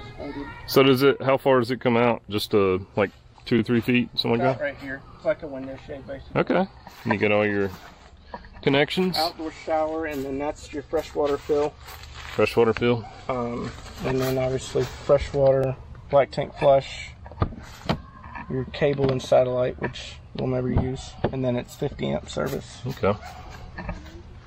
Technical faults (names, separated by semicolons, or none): overlapping chunks